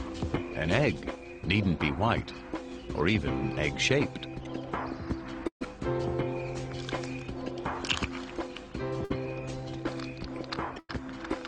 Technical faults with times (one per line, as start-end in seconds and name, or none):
5.47-5.63 burst of packet loss
9.05-9.12 burst of packet loss
10.79-10.91 burst of packet loss